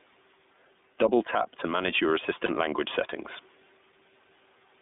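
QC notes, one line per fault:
Throughout: gain pumping. The level swings by around 5 dB. The room noise sits about 38 dB under the speech. This is likely a fast limiter or compressor fighting an input gain set far too high.
Throughout: iLBC codec. The audio is held between roughly 200 Hz and 3.6 kHz, with nothing above that. The speech sounds plainly rough and slightly synthetic, and the texture points to the 13.33 kbps iLBC mode with 30 ms frames coding each frame's excitation independently.
2.45–2.50 s: lost iLBC frames. Between "tap to manage your" and "language settings", about 30 ms drops out. The decoder fills it by repeating the last pitch cycle mixed with noise, so it comes across as a brief buzzy held vowel, which fits a single lost frame. Clean speech resumes immediately.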